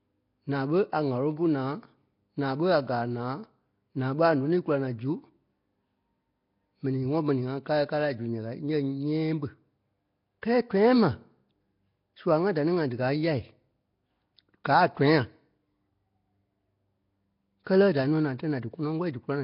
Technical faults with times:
0.00-19.43 Nellymoser compression

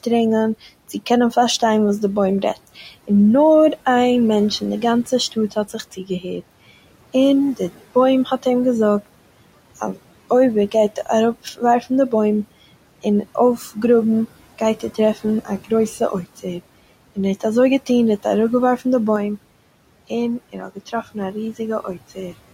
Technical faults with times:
0.00-22.54 noise suppressor artifacts
5.32-6.42 speech cut by the noise suppressor
19.16-22.54 input switched to a poorer device
20.53-20.93 speech cut by the noise suppressor

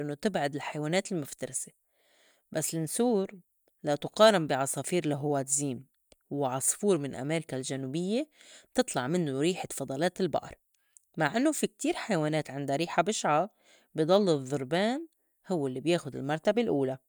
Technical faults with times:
none

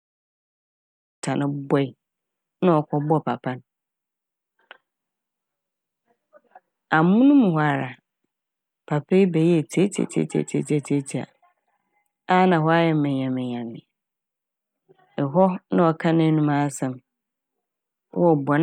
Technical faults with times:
none

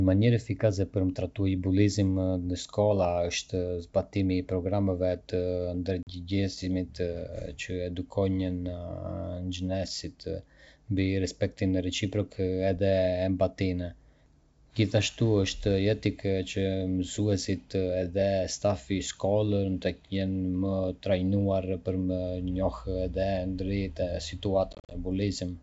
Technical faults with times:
6.03-6.10 packet loss on an ADPCM call
24.73-24.96 packet loss on an ADPCM call

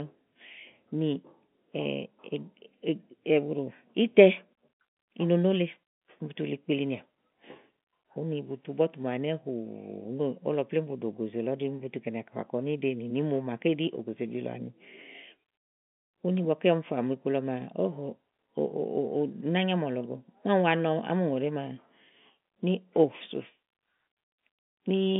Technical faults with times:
none

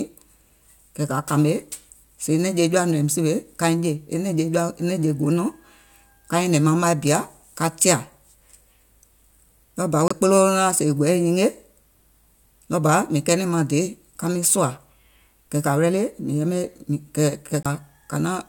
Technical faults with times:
10.08-10.13 Bluetooth stall
17.63-17.66 Bluetooth stall

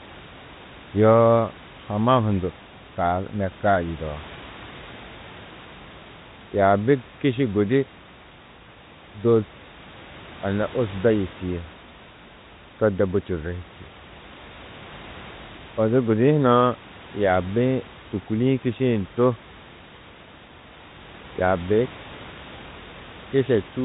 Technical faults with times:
none

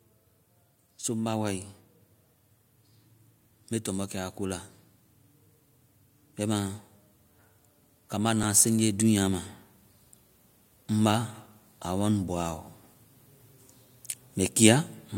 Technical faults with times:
8.11-9.50 automatic gain rising
8.43 audio missing between chunks
13.41 audio missing between chunks

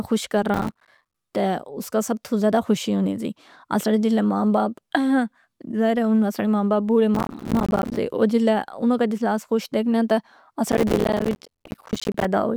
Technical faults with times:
0.54-1.14 processor overload crackle
7.15-7.97 processor overload crackle
10.72-12.25 processor overload crackle

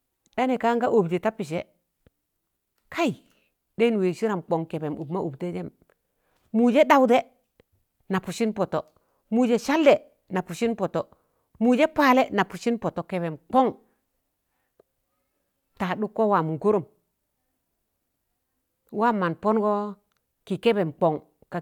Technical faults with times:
none

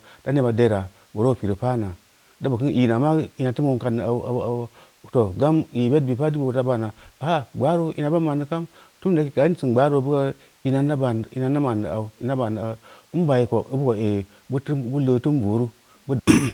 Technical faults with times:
none

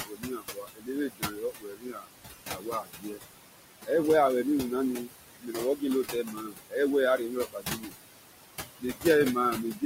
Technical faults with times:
0.00-9.86 noise suppressor artifacts
0.03-2.09 speech cut by the noise suppressor
2.46-3.21 speech cut by the noise suppressor
5.05-6.75 speech cut by the noise suppressor
7.18-7.93 speech cut by the noise suppressor
8.79-9.05 speech cut by the noise suppressor
9.56-9.83 speech cut by the noise suppressor

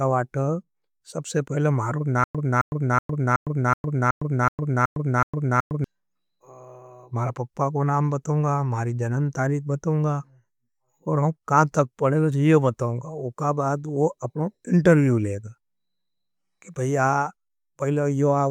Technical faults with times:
2.24-5.84 stutter with silent gaps

